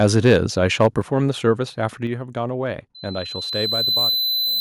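Harsh, crackling edges mark the loudest speech at 0.05 to 0.35 s and again at 0.81 to 0.86 s, likely microphone overload, with peaks driven about 3 dB and 2 dB past the converter's limit so their tops are sliced flat. At 1.02 s and again at 2.07 s, voice and background suddenly drop by about 6 dB and then about 5 dB, likely the microphone volume stepped down by the call software reacting to those hot peaks. From 2.95 s to the end, a single 4 kHz tone swells over roughly a second and a half into a loudspeaker feedback squeal, finishing about 5 dB above the speech as the microphone re-amplifies its own loudspeaker.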